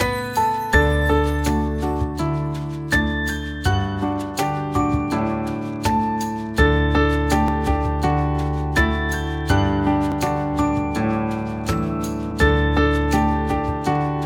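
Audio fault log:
0.74 s, 7.48 s, 10.12 s, 12.31 s: dropped buffer (overrun). At each point the audio jumps forward with no gap of silence. A short stretch of signal is missing and the two sides are spliced together, so the waveform breaks abruptly. The lost piece is a few milliseconds at the first and third jumps, longer at 7.48 s, and around 20 ms at 12.31 s. The likely cause is capture buffers being overwritten before they were read.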